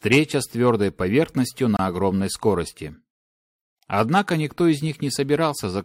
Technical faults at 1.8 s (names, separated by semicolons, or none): gap between stream segments